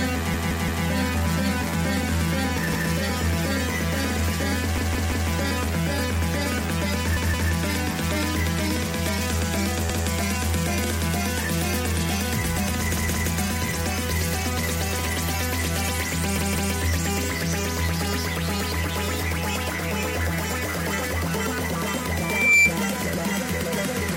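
Repeated buffer at 0.34, 2.73, 4.78, 7.17, 9.90, 12.97 and 16.38 s: each time the same 171 ms slice of sound plays again, one to three extra times, with hard joins. This stutter fits an 8192-sample buffer being replayed because fresh audio arrived late. Loudspeaker feedback squeal from 22.17 to 22.74 s: a 2.4 kHz tone swells over roughly 0.4 s to around 10 dB above the sound as the microphone-to-loudspeaker loop runs away.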